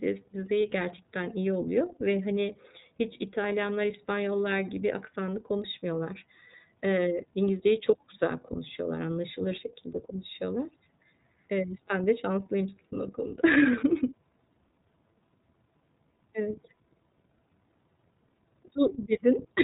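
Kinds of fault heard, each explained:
iLBC codec: The speech sounds muffled and boxed-in, with a plainly audible rough, slightly synthetic grain to it. Nothing reaches above about 3.8 kHz, so sibilants and breath lose their edge. This comes from iLBC, a narrowband VoIP codec that rebuilds each frame's excitation on its own without drawing on the previous frame, and the character here fits its 13.33 kbps mode with 30 ms frames.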